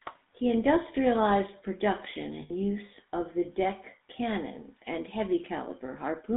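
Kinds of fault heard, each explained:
GSM full-rate codec: The whole clip of speech passes through the original GSM full-rate codec, which fits a 13 kbps bitrate. It models the vocal tract and drives it with a sparse train of regular pulses. The band runs from 200 Hz to 3.6 kHz, so the top of the speech is gone. The damage is plainly audible. The voice has a buzzy, gravelly roughness throughout.
lost GSM frames: From 2.42 to 2.51 s, about 80 ms of the signal drops out, which points to four lost frames. The decoder fills the gap by repeating the last good frame. So the sound does not cut to silence. It hangs on as a short, rough, metallic ring. Then normal decoding resumes. The gap is too brief to fade fully away.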